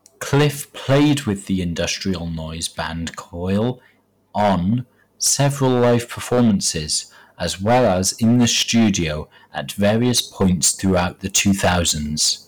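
Speech is driven about 11 dB into hard clipping throughout, flattening around one sample in twenty, so loud syllables crackle brightly instead of thickening like soft saturation.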